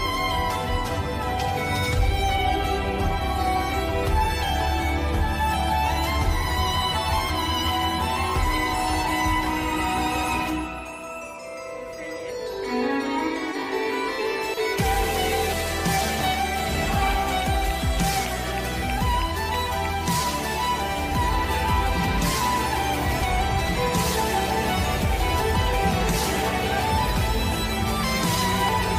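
At 18.26, 23.22 and 28.69 s, damaged data in the compressed stream makes the decoder misread corrupted frames and lose sync, giving brief glitches.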